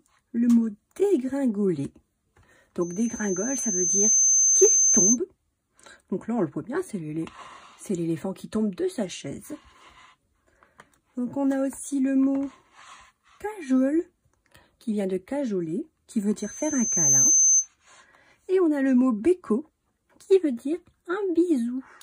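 Loudspeaker feedback squeal hits this audio twice, from 2.81 to 5.18 s and again from 16.37 to 17.68 s. Both times it's the same 6.2 kHz tone, so the mic and speaker loop is running away at one frequency where its gain tops unity. The first one swells over a second or so, the second comes up faster, in under a second. Each ends up sitting a few dB above the actual sound.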